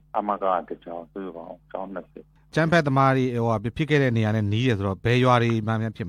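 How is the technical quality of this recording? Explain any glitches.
The technical quality of this recording is sound, with no glitches to explain.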